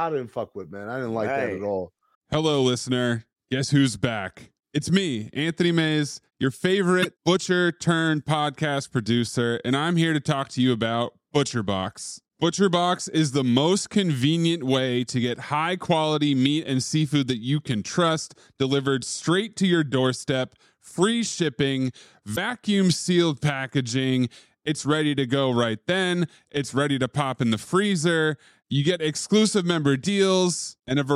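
At 6.99 to 7.06 s, just before "butcher turned podcast producer", and at 22.32 to 22.38 s, between "your doorstep free shipping" and "sealed packaging", damaged data in the compressed stream makes the decoder misread frames and resynchronise, producing a brief chirp, squawk, click or short hole.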